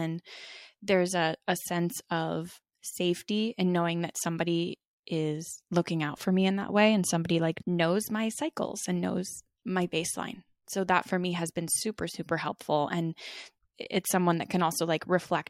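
A speech recording with one brief glitch from 13.83 to 13.86 s, where the sound skips forward and garbles for about one 26.1 ms frame. The likely cause is a broken MP3 bit reservoir: frames went missing, so the next frame fetched borrowed data from the wrong bytes.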